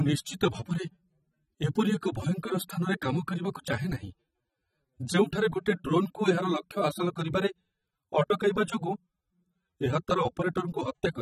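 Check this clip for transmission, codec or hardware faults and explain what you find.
There's one problem, and it runs the whole way through: AAC compression. The speech sounds dull and smeared, with nothing above 15 kHz, likely from AAC-LC at about 24 kbps quantising the spectrum too coarsely.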